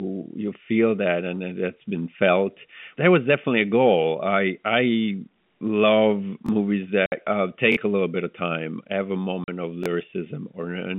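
At 6.46 to 6.49 s a repeated buffer occurs. New audio arrived late, so the playback device played its last block again, once, and about 20 ms of speech that should have followed was skipped. The repeated piece lasts about 21 ms, which fits a 1024-sample buffer. It is heard as a brief stutter with a hard join. On a waveform, two identical 21 ms blocks sit side by side. On a spectrogram, a short vertical seam marks the join.

At 7.06 to 7.12 s, packet loss filled with silence cuts a 60 ms hole in the speech, a length that fits three 20 ms packets. The gap starts and ends abruptly and can click at its edges. The waveform drops straight to a flat line and jumps back. The spectrogram shows a clean blank column across the whole 150 Hz to 3.5 kHz telephone band of the G.711 line.

At 7.72 to 7.77 s the buffer repeats again, this time with two extra plays, so about 40 ms of audio is lost. The same 21 ms segment sounds three times in a row, giving a longer stutter. 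The waveform shows three identical blocks, and the spectrogram shows repeating stripes.

At 9.44 to 9.48 s a second silent gap lasts 40 ms, which fits two lost packets. It has the same flat trace and blank spectral column.

Finally, at 9.84 to 9.86 s, one more single repeat of the 21 ms buffer produces a short stutter, again costing about 20 ms of speech.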